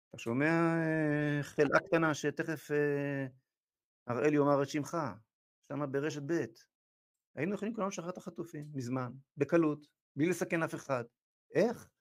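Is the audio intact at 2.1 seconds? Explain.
Yes, at 2.1 seconds the speech plays through cleanly, with no dropout, click, distortion or other fault at that point.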